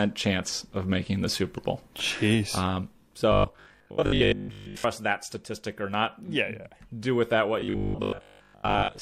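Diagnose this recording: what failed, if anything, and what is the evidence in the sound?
Robotic sound from repeated short buffers affects the speech from 3.32 to 4.84 s and again from 7.60 to 9.00 s. The voice becomes a rigid, metallic 50 Hz buzz that only loosely tracks the words. The likely cause is the driver or buffer stage starving, so the player loops the last 20 ms block for most of those stretches while the real audio is skipped. A spectrogram would show a flat comb of harmonics spaced 50 Hz apart, and the waveform would show identical 20 ms segments repeating.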